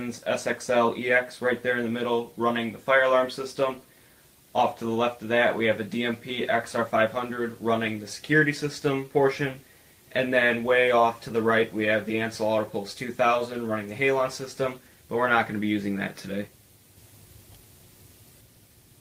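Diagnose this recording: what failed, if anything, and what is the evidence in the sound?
Nothing stood out on listening that would point to a failure at any stage of the chain.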